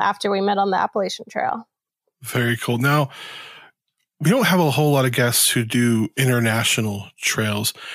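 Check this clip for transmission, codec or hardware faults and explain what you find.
Nothing in the speech points to a transmission, codec or hardware fault.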